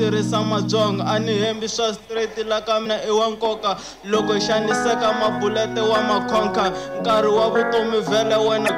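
The signal was most likely cut down to a low bit depth without dither, truncated rather than rounded, in a way that fits about 9 bits. The resulting error tracks the sound, sitting only around 45 dB below it, so quiet passages turn gritty and grainy throughout.

Damaged data in a compressed stream hits twice, at 2.82 to 2.86 s and again at 8.65 to 8.69 s. The decoder misreads corrupted frames and hunts for the next valid header, so each 40 ms spot comes out as a short chirp, squawk, click or hole.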